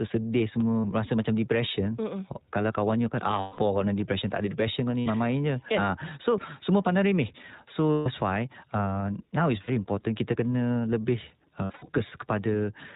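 The whole clip is speech passed through the iLBC codec. Nothing above 4 kHz survives. The voice is plainly rough and synthetic, which fits the 15.2 kbps mode with 20 ms frames. Each frame is coded on its own.

Lost iLBC frames then cause six gaps. They fall at 0.80 to 0.86 s, 3.40 to 3.59 s, 5.00 to 5.08 s, and 7.92 to 8.08 s just before "why uh now". Another falls at 9.62 to 9.70 s before "important kita". The last is scattered over 11.64 to 11.90 s, its longest run around 70 ms. In each gap the decoder repeats the last pitch cycle with noise, so you hear a held, buzzy vowel. The voice returns almost at once.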